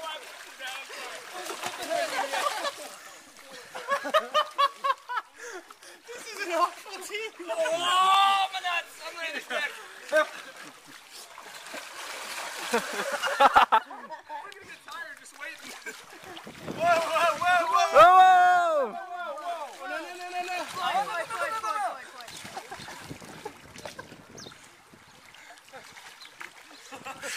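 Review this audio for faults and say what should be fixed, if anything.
You'll hear little clicks or micro-skips at 2.18, 4.18, 6.16, 8.15, 10.12, 12.11 and 16.10 s. That's overlap between stream segments: roughly every 2 s boundary, overlapping timestamps make the player trim 6 to 18 ms of real audio, so the waveform jumps. To fix it, make the segmenter stamp each segment to start exactly where the previous one ends.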